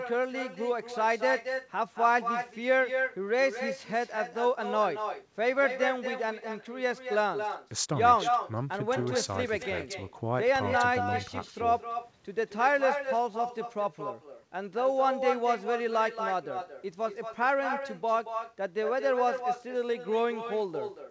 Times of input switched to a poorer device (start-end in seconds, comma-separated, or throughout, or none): none